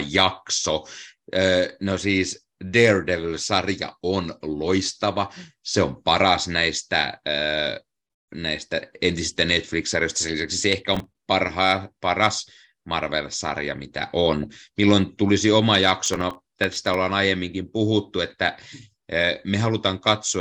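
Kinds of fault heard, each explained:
Processor overload crackle: The processor fell behind on very short audio buffers, around a millisecond and a half each, and missed a run of deadlines in a row. Each miss replayed a scrap of old audio with hard edges, so the speech picks up a gritty crackle. A handful of misses make a short burst from 10.94 to 11.17 s. Around twenty make a longer tearing stretch from 16.06 to 16.94 s.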